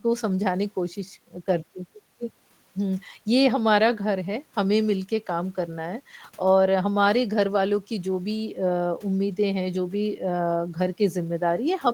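Speech recording with no technical faults audible anywhere.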